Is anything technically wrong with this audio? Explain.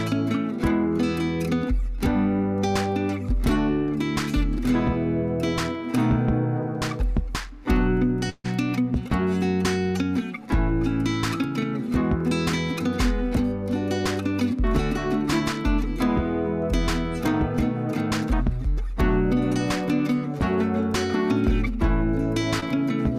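Yes, two packet-loss faults.

A burst of packet loss runs from 8.29 to 8.46 s. The receiver stretched the last sound and faded it over about 147 ms, with about 10 ms of silence. Playback then resumes with roughly 140 ms of audio missing.

A short concealed packet loss occurs at 22.60 to 22.64 s. About 20 ms arrived too late, and about 16 ms of continued sound covers the gap before blending back, leaving a brief smear.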